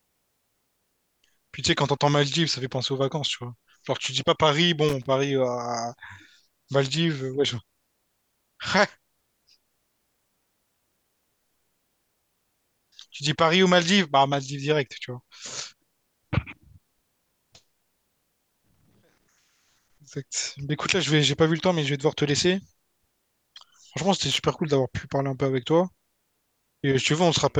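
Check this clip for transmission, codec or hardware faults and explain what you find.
The clip has one hardware fault, occurring three times. Loose connector crackle at 4.89 to 5.06 s, 18.66 to 18.95 s and 24.31 to 24.49 s: a worn or dirty contact somewhere in the cable run is making and breaking as it shifts, so the speech signal is chopped on and off many times within each burst, and any DC on the line turns each break into a pop. It sounds like a short, irregular scratch, the middle burst noticeably longer.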